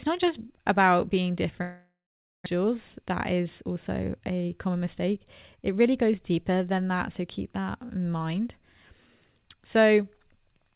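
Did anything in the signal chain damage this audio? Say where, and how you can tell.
Yes. A long network dropout runs from 1.62 to 2.48 s, right after "not just about being". The receiver stretched the last speech into a fading buzz or hiss, then held near-silence for about 490 ms. About 840 ms was filled in this way, and roughly 600 ms of real speech never plays. When the audio resumes, the missing part is simply skipped. The likely cause is a burst of lost or very late packets on the network, which pushed the playout delay out by around a fifth of a second.

A jitter buffer speed-up follows from 2.56 to 5.26 s. The speech runs about 8% fast at unchanged pitch and sounds hurried. After the dropout, delayed packets arrived in a bunch and overfilled the buffer. The receiver then cut many short pitch-period slices from the speech to drain it back toward its target, removing roughly a fifth of a second in total. 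Throughout the clip, nothing is heard above 4 kHz, which fits a G.711 mu-law call codec at 64 kbps.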